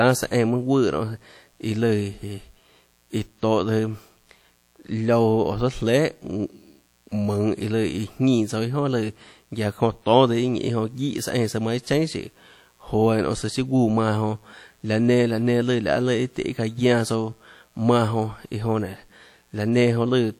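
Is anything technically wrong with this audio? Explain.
Yes, two faults run through the whole speech clip.

Mains buzz sits under the speech from start to finish, at a low level, roughly 40 dB below the signal. Its fundamental is 60 Hz, but it is not a smooth hum. Sharp switching spikes, arriving twice per mains cycle from something like a dimmer, rectifier or unshielded lead, stack up harmonics reaching several kilohertz. That gives a steady, raspy edge, where pure hum would be a soft, rounded drone.

The speech also carries plainly audible coding damage for the full duration, likely from WMA compression at a bitrate around 48 kbps. Long transform blocks smear quantisation noise across tens of milliseconds, so consonants ring and vowels turn washy, and faint detail drops out where weak spectral lines get zeroed. The hiss swells and fades with the speech, which tells it apart from a fixed noise floor. 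Nothing is present above about 19.8 kHz.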